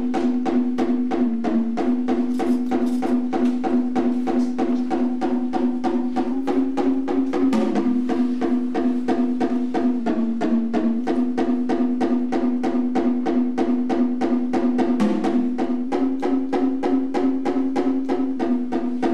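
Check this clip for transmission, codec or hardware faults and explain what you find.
A drift correction step recurs four times: at 1.27–1.79 s and 10.00–10.99 s the sound slows about 6.5% and drops 116 cents; at 6.33–7.71 s and 15.88–18.37 s it speeds about 6.5% and rises 109 cents. Speed and pitch shift together, then snap back, likely from clock-matching software abruptly changing playback rate to rebalance its buffer.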